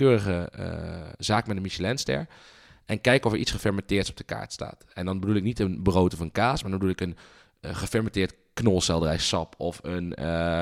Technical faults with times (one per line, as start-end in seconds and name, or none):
none